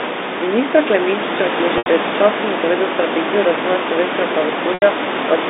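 At 1.78 s and again at 4.74 s the speech breaks for about 80 ms, a gap that fits four lost 20 ms packets, and each is bridged by packet loss with pitch repetition. The receiver loops the last pitch period, so the sound briefly freezes into a buzzy held tone that fades over roughly 50 ms to silence before speech cross-fades back. On a spectrogram the harmonics run flat and unchanging, thin out, then leave a short blank band; the waveform shows identical repeating cycles shrinking to nothing.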